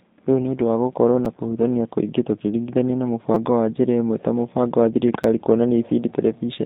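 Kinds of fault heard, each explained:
G.729 codec: The speech passes through an 8 kbit/s model-based coder. The band runs from about 150 Hz to 3.7 kHz, with plainly rough, synthetic texture.
Repeated buffer: Late audio made the device replay its last short piece, about 5.8 ms, which fits a 256-sample buffer. This gives brief clicks or buzzes at 1.25, 3.34 and 5.24 s.
VoIP packet loss concealed by the speech codec: About 20 ms of packets went missing at 1.37 s. The decoder stretched its last sound into a fading buzzy tone or coloured noise lasting until about 1.42 s.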